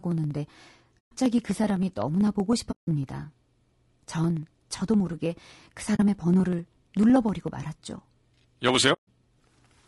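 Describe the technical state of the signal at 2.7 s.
At 2.71 s the speech fades into a soft-edged gap that lasts until 2.88 s, about 160 ms. This is AAC frame loss with muting. Several consecutive coded frames were lost and the decoder zeroed their spectrum, so the overlapping windows ramp the signal down and back up. On the waveform the envelope tapers smoothly to flat silence and then rises again. On a spectrogram it appears as a clean vertical band of nothing across all frequencies, with blurred rather than sharp edges.

Around this gap the periodic USB or driver dropouts continue. Roughly half a millisecond of audio is skipped every 63.5 ms, a pattern that runs from 0.05 s to 9.83 s. Each skip joins two points of the waveform that do not meet, so it ticks regularly while sound is present and goes quiet inside the muted stretch. A waveform shows small step discontinuities at even spacing. 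A spectrogram shows thin broadband vertical lines on a steady grid.

The speech here also sounds rough and grainy. There is noise filling the gaps between harmonics and the top band sounds thin and synthetic. This is low-delay AAC compression, likely AAC-ELD at a low rate around 32 kbps, whose short frames resolve pitch harmonics poorly. On a spectrogram the harmonic stripes look smeared and speckled, and the upper band is patchy.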